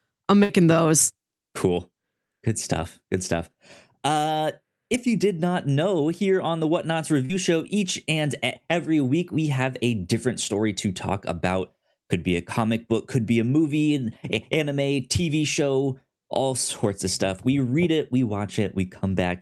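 Half a second in, from 0.43 to 0.51 s, the sound stops moving forward: the last instant is held and dies away for about 60 ms, and when the audio picks up again it has jumped ahead, skipping roughly 60 ms of speech. This is a burst of packet loss. Several consecutive packets failed to arrive in time, so the receiver extended and faded the final sound it had rather than leave silence.

At 7.25 to 7.31 s there is a briefer blur, a smeared instant of about 40 ms where the speech loses its definition before blending back in. This is short concealed packet loss. A few hundredths of a second never reached the decoder, and the receiver patched the hole by continuing the preceding sound and crossfading into the real audio once it resumed, all over a band that tops out near 12 kHz, as the call path passes it.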